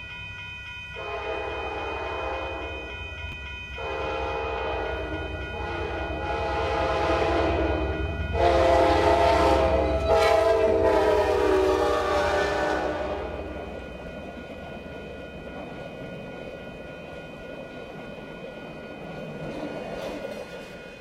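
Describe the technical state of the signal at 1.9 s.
At 1.9 s the signal is intact, with no dropout, distortion, glitch or other fault audible at that point.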